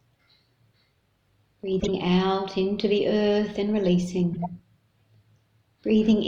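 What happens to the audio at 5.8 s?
Nothing goes wrong at 5.8 s; the audio runs on cleanly through that moment with no dropout, click or distortion.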